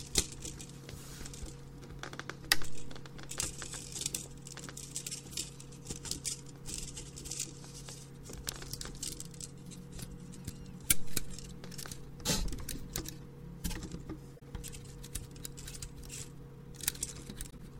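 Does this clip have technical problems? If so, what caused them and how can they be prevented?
Yes, the audio has corrupt frame decoded errors at 5.23–5.31, 10.84–10.93, 14.36–14.43, 15.71–15.75 and 17.50–17.68 s. Each covers a few damaged compressed frames that the decoder played with misread gains and codes. This produces brief chirps or noise bursts, loudest at 10.84 s, near full scale. On a spectrogram they show as short, sharp-edged smears of misplaced energy, and on the waveform as spikes. Checksums with frame concealment or muting would prevent this.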